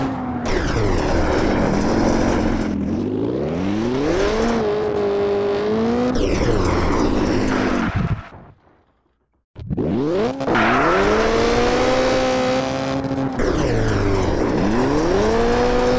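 No technical faults can be heard anywhere in this clip.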